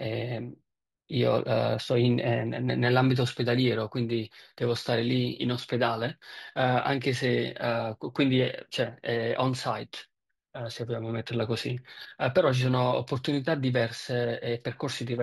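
Throughout the speech, imaging from linear upsampling shows: 16 kHz audio was raised to 44.1 kHz by joining samples with straight lines. Mirror copies fill 8 to 16 kHz, roughly 30 dB down, adding faint metallic shimmer to sibilants. This is unlike a clean band-limit, which leaves silence above 8 kHz.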